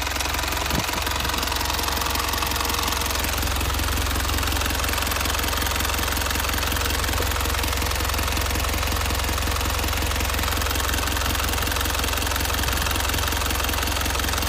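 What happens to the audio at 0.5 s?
Nothing goes wrong at 0.5 s; the audio plays through that moment intact, with no audible fault.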